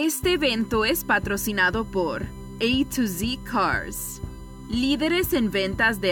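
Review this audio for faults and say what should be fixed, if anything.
A steady, fixed-pitch whine at 1 kHz runs through the whole clip, about 30 dB below the signal. This is USB whine: the bus draws current in 1 ms frames, and that pulsing leaks into the audio through shared power or ground. Powering the interface separately or adding a ground-loop isolator would prevent it.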